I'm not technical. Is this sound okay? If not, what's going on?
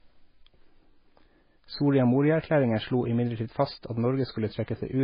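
No. The speech has heavy MP3 compression damage from start to finish, likely from saving it at a very low quality setting. It sounds watery and swirly, with smeared consonants and nothing above about 5.1 kHz. A plain muffled recording loses treble without that warbling.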